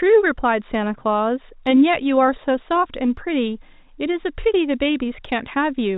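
No technical faults can be heard in the speech, which carries the narrow band of G.711 telephone coding, with nothing above 4 kHz and a character that fits 64 kbps A-law.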